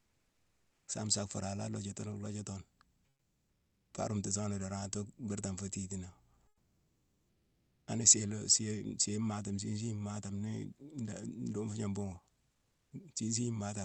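A speech recording in which the pauses at 0.00–0.87 s, 3.09–3.91 s, 6.47–7.87 s and 12.51–12.91 s carry comfort noise in place of the background: the natural room sound gives way to a smooth, featureless hiss about 2 to 5 dB quieter, likely from Opus discontinuous transmission synthesising noise while nothing is sent. Unlike a noise gate, which would leave near-silence, a steady noise floor persists; it just loses its texture until speech resumes.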